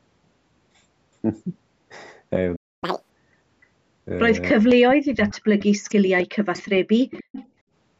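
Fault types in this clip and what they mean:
Playback stall: the speech just drops out at 2.56 s and stays silent for about a quarter second, until 2.84 s. That's most likely the player running dry or getting its thread held up, so nothing reached the output for that stretch.
Catch-up at higher speed: right after that gap, from 2.84 to 3.10 s, the speech runs at double speed with the pitch jumped up by nearly an octave. The player is rushing through what piled up during the stall, then it settles back to normal.
Speech suppressed in double talk: from 4.58 to 5.69 s, and again from 5.86 to 6.54 s, the talker dips hard, down by around 40 dB at worst. That's likely an echo canceller clamping down because both ends were talking at once.
Echo leak: a faint delayed copy of the speech trails about 292 ms behind, at 5.85, 6.55 and 7.10 s, some 15 to 20 dB under the main voice. The far end's loudspeaker sound likely wasn't fully cancelled and got sent back.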